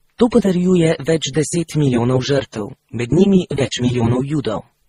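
The speech has likely passed through a chain of lossy codecs, most plausibly a low-rate AAC encode, then a low-rate MP3 encode, and finally Opus, a case of transcoding between lossy codecs. Each later stage spends bits re-encoding the artefacts left by the one before while adding its own. Across the whole clip, nothing sounds above 15.7 kHz, and the separate codecs' artefacts are heard layered together rather than as one clean signature.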